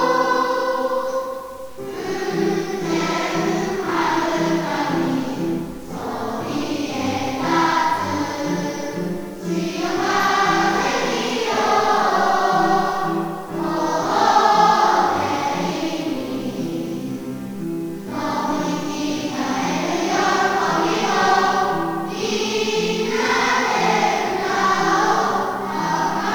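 Across the whole clip the audio carries grainy distortion that rises and falls with the sound, about 30 dB below it, which points to low bit depth without dither, likely around 7 bits with plain rounding. Unlike steady hiss, the grit tracks the signal.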